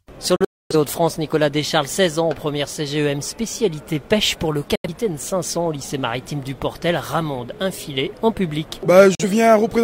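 Digital broadcast dropouts occur at 0.36 to 0.75 s, 4.75 to 4.89 s and 9.15 to 9.24 s. Each time the receiver lost good frames and muted, so the sound fades out within 3 ms and is gone until it returns. The first is two holes, the longest 256 ms.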